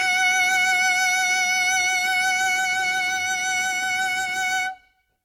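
Throughout, the music sounds swirly, hollow and smeared, with blurred attacks and nothing above 16.6 kHz. That is worse than one encode near 63 kbit/s would explain, pointing likely to generation loss from about five Vorbis passes.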